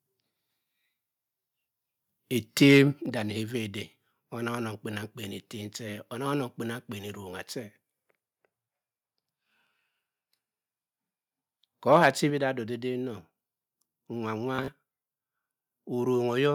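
Microphone overload at 2.62 to 2.79 s: the loudest stretch of speech turns harsh and crackly, with the peaks flattened by about 3 dB. A few percent of the samples are clipped at the converter's limit. The likely cause is a microphone input set too high, so the converter runs out of headroom and squares off the waveform tops.

A microphone volume step-down follows at 3.06 s. The speech and the background behind it fall together by about 5 dB in an instant, which suggests the call software reacted to the distorted peak by lowering the device's input volume in a single jump.

The same pair returns later. A second microphone overload at 11.92 to 12.07 s is more severe, with peaks pushed about 6 dB past the limit and a couple of percent of samples clipped. Another microphone volume step-down at 12.3 s drops the level by about 4 dB, again shortly after the distortion and again in one abrupt step rather than a fade.

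Bluetooth stutter at 14.56 to 14.72 s: the sound breaks into a brief machine-gun buzz as short slices repeat. About 76 ms of audio goes missing, scattered over roughly 122 ms, and the longest gap is about 30 ms. Packets arrived late or were lost, so the receiver kept replaying its last buffer. When data resumed, playback jumped ahead as though it had carried on.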